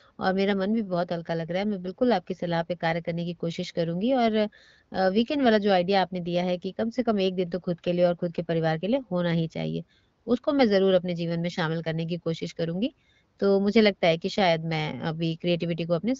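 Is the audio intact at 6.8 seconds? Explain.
Yes, the speech at 6.8 s is intact, passing through the AMR wideband (HD Voice) codec at 15.85 kbit/s without any fault at that moment.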